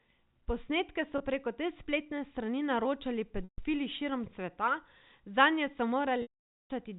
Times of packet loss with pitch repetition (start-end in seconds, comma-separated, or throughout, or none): 1.18-1.20, 3.44-3.58, 6.22-6.70